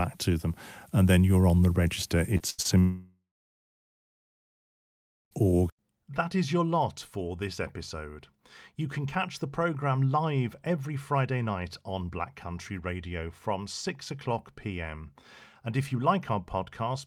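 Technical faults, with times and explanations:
2.37–2.42 s and 2.62–2.67 s, short concealed packet loss: right after "you're on the register", and again inside the following burst, about 20 ms of audio is missing and patched by roughly 25 ms of continued sound. Each is heard as a quick smear or wobble, not a held buzz, because the patch is too short to fade.
2.50–2.75 s, burst of packet loss: also just after "you're on the register", about 80 ms in a row never arrived. The decoder stretches the last sound into a held buzz or hiss that dies away, and about 10 ms are dropped outright. It is longer and more audibly fading than the smears, but the audio resumes in well under a second.
2.80–5.33 s, long network dropout: the sound stops for about 2.5 s. A brief continued tail fades out, then roughly 2.1 s of silence follows before the audio comes back further on. The likely cause is that no packets arrived at all for this stretch. 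It differs from the burst because the fill gives up and leaves silence.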